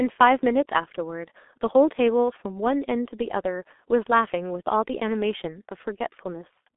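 Throughout, G.723.1 codec damage: speech is muffled, with nothing above 3.8 kHz, and hoarse, smeared consonants. The slow 30 ms framing, fitting roughly 6 kbit/s, distinguishes it from simple band-limiting.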